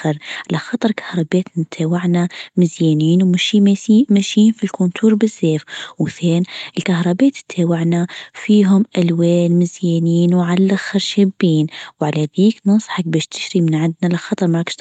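Nothing stood out on listening to this speech clip.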